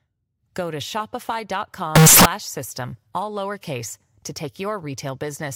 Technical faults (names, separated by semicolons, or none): float read as integer